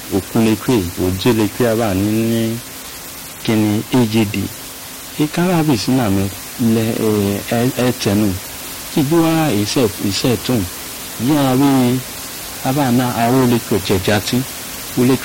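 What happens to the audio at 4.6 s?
Nothing goes wrong at 4.6 s: the speech carries on intact, with only the room noise about 15 dB below it.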